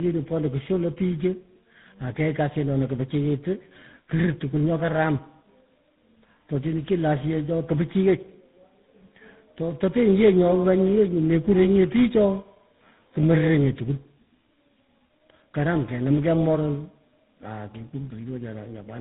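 Tandem speech coding runs through the clip. The speech passed through three speech codecs in a row, each recoding the last one's damage. The sound fits a G.726, CVSD and GSM full rate chain. It is rough, muffled and warbly, with nothing above 3.8 kHz.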